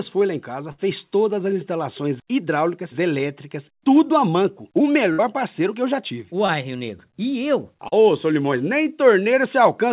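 At 0.72 to 0.80 s and again at 5.12 to 5.20 s, a burst of packet loss is followed by about 60 ms of concealment: the last sound is extended as a fading buzz or hiss, then the audio jumps ahead past the missing part. On a spectrogram, it appears as a smeared, decaying stripe, and the waveform shows a tapering envelope before an abrupt restart.

Short concealed packet loss at 6.46 to 6.50 s and 7.88 to 7.94 s, covering 20 ms and 40 ms, leaves brief smears or wobbles. These appear as blurred columns and small envelope dips on a spectrogram, all within a band ending at 4 kHz that fits a G.711 A-law path.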